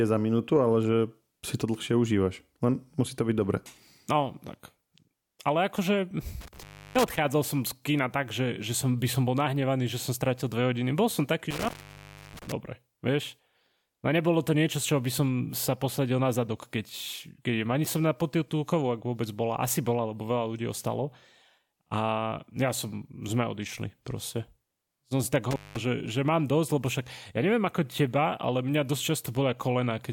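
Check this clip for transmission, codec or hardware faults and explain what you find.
One hardware fault recurs: intermittent contact at 6.41–7.18 s, 11.51–12.52 s and 25.51–25.81 s. A loose connector briefly opens the line for 0.32 s, 0.66 s and 0.2 s, so the speech drops to faint hiss with crackle at each edge.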